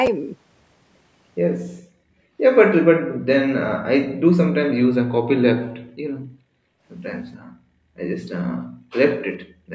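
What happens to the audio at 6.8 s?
The echo canceller is gating the background: from 5.73 to 6.85 s, while the far-end loudspeaker plays, it clamps the microphone down by about 40 dB. At 6.8 s the room sound is still sunk in that dip, and it returns as the canceller releases.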